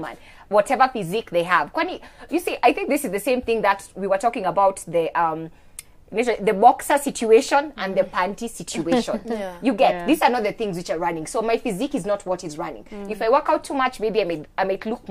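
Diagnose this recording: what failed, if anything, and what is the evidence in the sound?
Nothing in the signal chain appears to have failed, since the sound shows no audible evidence of a fault at any stage from capture through playback.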